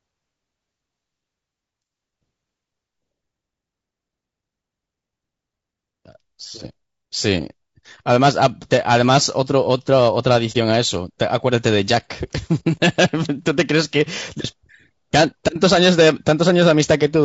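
Low-delay AAC compression runs through the whole speech clip, audible as a rough, grainy texture with hiss filling the gaps between harmonics and a thin, artificial top band. This is likely AAC-ELD, whose short frames resolve pitch detail poorly, and the damage level fits a bitrate around 32 kbps.

AAC frame loss with muting follows from 10.52 to 10.56 s, a brief soft-edged gap. A lost frame's spectrum was zeroed, so the overlapping windows fade the sound out and back in around the hole, consistent with a single missing frame.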